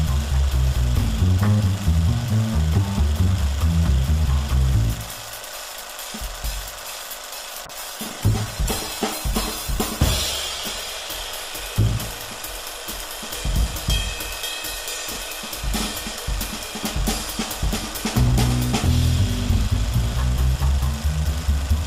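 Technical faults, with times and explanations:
7.66–10.97 s, call bitrate drop: the encoder rate falls from 128 to 21 kbps, so coarse coding sounds rough and muffled; the spectrogram loses its upper band and looks smeared.
15.12–15.16 s, chunks out of order: a 10 ms chunk plays three chunks late, causing a jumbled instant; the waveform shows three abrupt joins, and the spectrogram shows thin vertical streaks.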